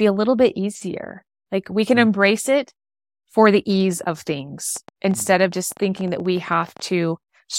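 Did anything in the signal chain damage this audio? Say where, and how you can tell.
Yes. The damage most likely comes from the analogue wiring or interface: nearby equipment or a faulty connection or power supply injecting a burst of pulses. Just after "for the ease of", from 4.77 s to 6.81 s, a train of clicks sits over the speech, around thirty near-identical pops at roughly 13 per second but unevenly spaced. They reach about the level of the speech itself, so they cut through clearly as ragged ticking rather than hiding under the voice.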